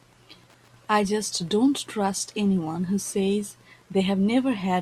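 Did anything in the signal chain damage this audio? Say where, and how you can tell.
Yes, in the analogue wiring. Under the speech there's Wi-Fi interference: a faint, steady tick about every 102.4 ms, roughly ten a second, sitting well down, around 40 dB below the speech, for the whole clip. A nearby radio's beacon gets rectified by the audio circuitry.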